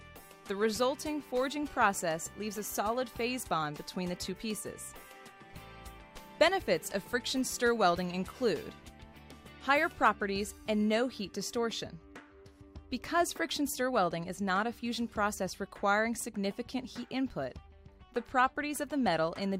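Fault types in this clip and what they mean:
Nothing's wrong here: there's no fault to point to anywhere in this audio.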